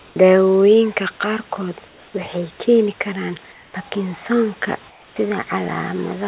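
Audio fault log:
0.00–0.16 s, 1.88–2.14 s, 3.52–3.74 s, 4.90–5.16 s: comfort noise in place of the background. During these pauses the room noise turns steady and featureless, and drops about 1 to 3 dB. This is likely from discontinuous transmission, with the receiver filling in synthetic noise.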